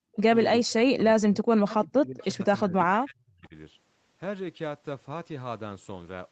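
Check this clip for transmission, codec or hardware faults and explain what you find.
Two faults are present: speech suppressed in double talk, in four stretches, and a brief echo leak, twice.

Speech suppressed in double talk appears at 0.0–0.09 s, 0.64–1.45 s, 1.63–2.44 s and 2.66–3.55 s. The speech dips and breaks up, falling by up to about 40 dB. The likely cause is an echo canceller that could not separate near speech from far-end echo during overlap and attenuated both.

The echo leak appears at 2.2–2.26 s and 3.44–3.48 s as a faint delayed copy of the speech, about 30 dB and about 40 dB below it, lagging by 361 ms. This is likely residual loudspeaker pickup that the canceller failed to remove and that was sent back.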